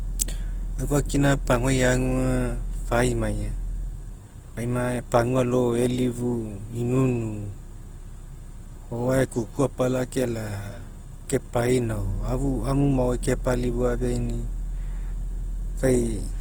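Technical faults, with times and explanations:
throughout: Opus compression. The speech sounds plainly rough and grainy, with harmonic tones turned noisy rather than swirly, which points to the likely cause: Opus in its music (CELT) mode at a low bitrate around 16 kbps. The encoder keeps each band's energy but rebuilds detail by folding lower bands or adding noise. A spectrogram shows energy up to about 20.1 kHz with few holes, but the harmonic lines look smeared and speckled.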